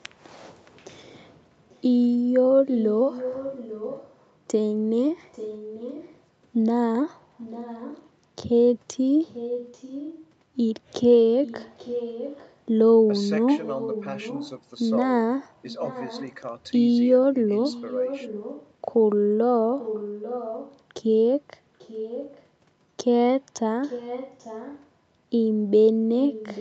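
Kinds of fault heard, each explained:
Echo leak: Throughout the clip, a faint repeat of the speech trails the original by 840 ms, sitting roughly 15 dB below it. The likely cause is a loudspeaker-side echo canceller letting its microphone's pickup pass back into the call.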